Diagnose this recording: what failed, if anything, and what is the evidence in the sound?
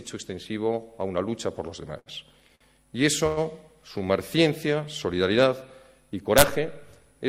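At 1.99 to 2.09 s and again at 2.55 to 2.64 s the sound briefly sticks, holding one moment a little too long with a faint buzzy smear, then carrying on with nothing lost. These are short stalls from a late packet at the network and jitter-buffer stage. The buffer ran dry, so the receiver stretched the last audio, about 66 ms and 52 ms, and resumed from the same point once each packet arrived.

A longer hold starts at 3.27 s and lasts to 3.40 s. The last sound is drawn out as a buzzy continuation for about 103 ms without fading to silence, and the audio then picks up exactly where it stopped. This is a call audio freeze, a gap inserted rather than audio removed. The likely cause is a run of packets held up on the network, leaving the jitter buffer empty until they arrived.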